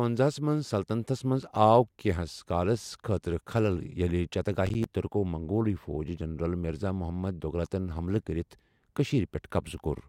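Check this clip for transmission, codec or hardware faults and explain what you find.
One fault is present in this speech clip. Processor overload crackle runs from 4.67 to 4.85 s, just before "ترکو منگول فوجی جنرل". The processor missed several buffer deadlines in a row, and each missed buffer became a hard-edged silent gap. The gaps come in a quick run that fits roughly five buffers of around 10 ms each, and they are heard as a brief gritty crackle over the speech.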